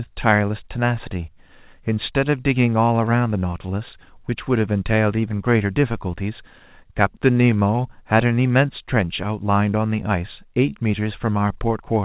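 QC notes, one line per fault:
Throughout: clock drift between sender and receiver. The sending clock runs about 3% slow, so the jitter buffer keeps draining and the receiver must fill the gap with repeated fragments. The narrowband G.711 path tops out at 4 kHz.
0.02–12.0 s: repeated timing corrections. The receiver inserts short repeated pieces at uneven intervals, all lengthening the audio, for a playback speed of 97% and roughly 0.4 s added overall. Each edit is small.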